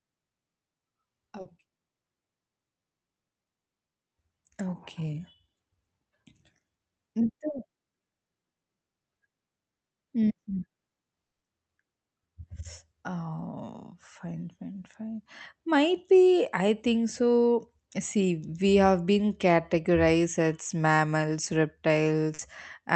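Speech, with brief smears or wobbles at 1.41, 7.51 and 22.35 s. These are short concealed packet losses, where 40, 20 and 40 ms never arrived and the receiver stretched the preceding sound across each gap. From 11.21 to 11.45 s the sound trails off into a fading fill and then a gap of silence, with no return of the missing audio. This is likely a long network dropout, with about 0.22 s lost in transit.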